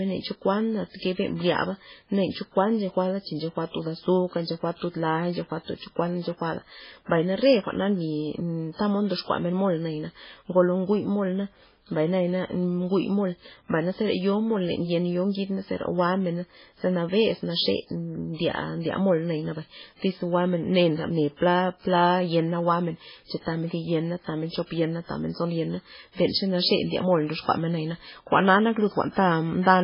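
From start to finish, the speech has no content above about 5.3 kHz. The top is sharply cut, and the sound is watery and swirling, with chirpy metallic edges on s sounds. Consonant attacks blur. The damage is heavy. The likely cause is MP3 compression at a very low bitrate, which fits about 16 kbps. Starved of bits, the encoder drops the treble at a fixed frequency. It zeroes weak frequency lines that flicker on and off between frames.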